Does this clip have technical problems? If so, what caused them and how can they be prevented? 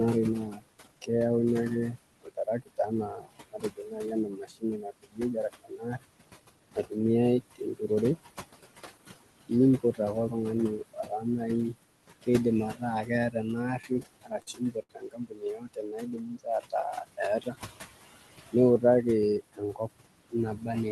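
Yes. The noise suppressor attenuates whatever bands it judges to be steady noise, frame by frame, throughout the clip. The residual background pumps between and under the speech. Gentler suppression settings would prevent this.

Speech was also cut by the noise suppressor, which mistook parts of the speech for noise and pulled them down by up to about 22 dB. This happened at 0.47–1.09 s, 1.96–6.92 s, 7.51–10.33 s, 10.93–18.83 s and 19.52–20.68 s, leaving soft sounds and word endings swallowed. A less aggressive suppressor with better speech detection would prevent it.

Repeated stalls (stutter) occur from 13.82 to 14.91 s. Packets arrived late, so the jitter buffer emptied seven times, each gap up to 68 ms, and the receiver stretched the last sound to fill each one. The result is a dragging stutter. A steadier network or a deeper jitter buffer would prevent it.

A jitter buffer speed-up runs from 17.27 to 17.80 s. 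The buffer had built up too much audio and trimmed short pitch periods to cut the delay, so the speech plays about 7% faster at unchanged pitch. Avoiding delayed packets arriving in bursts, through a more stable connection, would prevent it.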